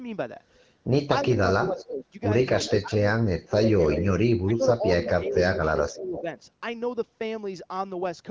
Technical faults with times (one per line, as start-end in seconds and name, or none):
1.31-6.26 speech suppressed in double talk
1.64-1.86 echo leak
2.62-2.79 echo leak
3.94-4.12 echo leak
5.04-5.29 echo leak
5.88-6.22 echo leak